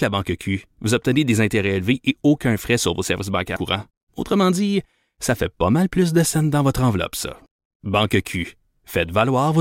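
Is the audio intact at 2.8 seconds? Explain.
Yes, at 2.8 seconds the speech runs through without any dropout, glitch or other fault.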